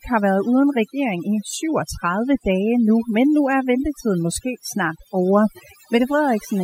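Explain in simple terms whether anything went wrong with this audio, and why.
Overdone noise removal runs through the whole clip: a noise reducer set too strong strips quiet parts of the speech, leaving twinkling near-silence between phrases.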